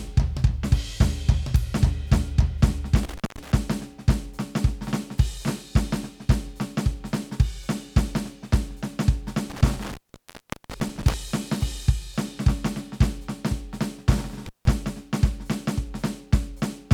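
The music drops out with crackly edges at 3.03, 9.50 and 14.46 s, a classic intermittent contact: a loose connection opening for roughly 0.2, 0.76 and 0.16 s, leaving faint hiss.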